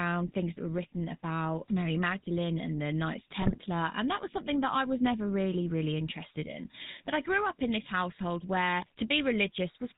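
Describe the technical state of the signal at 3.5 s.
At 3.5 s the signal is inside a burst of GSM bit errors running from 3.40 to 3.58 s, ending just before "and that was something". Corrupted filter, pitch and gain parameters reach the decoder, so for a few frames the spectrum bends wildly and the level jumps. The result is squawks, pops and gargling. The span of about 170 ms points to a run of roughly eight damaged 20 ms frames on a weak link.

Underneath, and throughout the clip, is plainly audible GSM full-rate codec damage, consistent with the 13 kbps full-rate coder. It models the vocal tract and excites it with a regular pulse train that retains only every third excitation sample, so the speech has a buzzy, gravelly roughness. Nothing above 4 kHz survives, which leaves the top end dull and band-limited.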